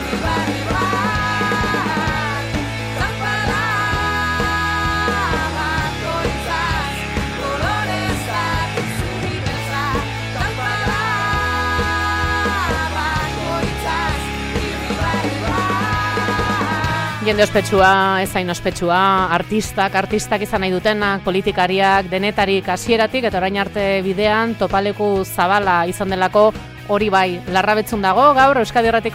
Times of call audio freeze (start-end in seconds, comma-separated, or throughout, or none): none